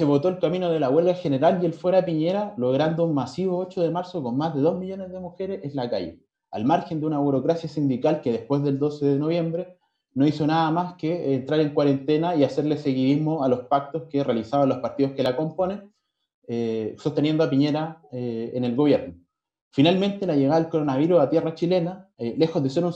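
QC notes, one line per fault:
15.26 s, repeated buffer: new audio missed its deadline, so the playback device replayed its last block once more. The block is only about 1.45 ms long, which fits a 64-sample buffer. Two hard joins that close together are heard as a single brief click rather than a stutter, with essentially nothing lost.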